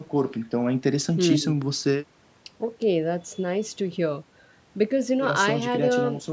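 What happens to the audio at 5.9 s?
Nothing goes wrong at 5.9 s: the speech carries on intact through that moment, with only the usual band limit of call microphone processing, which holds the sound below 8 kHz.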